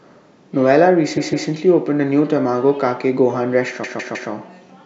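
At 1.16 s and 3.83 s, repeated frames: a 0.16 s compressed block replays twice, then three times, making a stutter and identical, abutting spectrogram slices.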